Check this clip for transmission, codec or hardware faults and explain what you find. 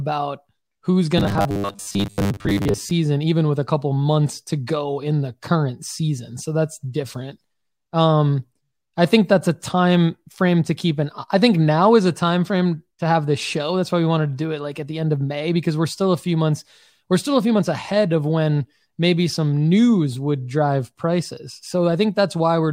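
One fault is present. From 1.18 to 2.92 s there is robotic sound from repeated short buffers: a rigid 100 Hz metallic buzz, likely a 10 ms buffer looping while most audio is skipped. Unlike dropouts, it leaves no silent gaps.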